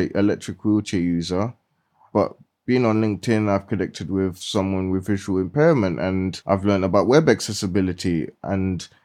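Nothing in this speech recording stood out as a technical problem on listening.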